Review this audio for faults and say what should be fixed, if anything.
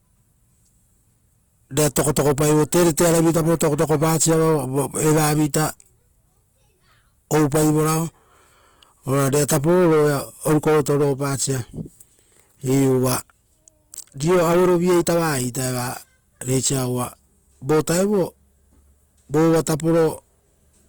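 Throughout, the speech sounds grainy and rough, with tones turned noisy. This is likely Opus compression in CELT mode filling bit-starved bands with noise, which fits about 24 kbps. To prevent it, encode Opus at a higher bitrate or deliver from a lossless master.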